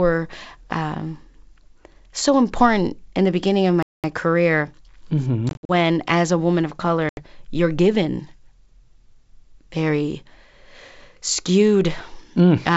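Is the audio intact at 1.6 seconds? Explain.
Yes, the audio is intact at 1.6 seconds, with no fault there and the speech passing through G.722 wideband telephone coding at 64 kbit/s.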